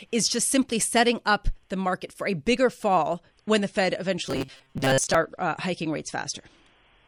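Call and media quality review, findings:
Adaptive stream at a lower bitrate, 3.18 s to end. Sudden drop in quality, codec artefacts up, no gap. Player switched rendition. Sound points to MP3 falling from 128 to 40 kbit/s.

Robotic sound from repeated short buffers, 4.26 to 5.16 s. Rigid metallic buzz at 133 Hz. Likely cause: starved playout buffer repeating its last chunk, which fits a buffer of about 7.5 ms. Roughly half the stretch is repeats; real audio skipped.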